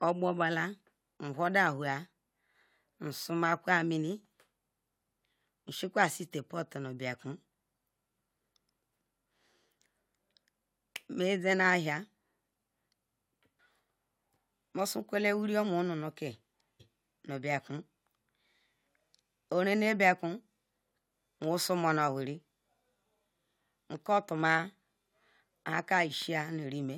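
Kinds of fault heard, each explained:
Stream segment skipped: At 16.79 s the speech jumps abruptly forward with a small blip, landing on "nu bekun". A chunk of the programme is simply gone. The likely cause is one segment of the stream failing to load, so playback carried on with the next.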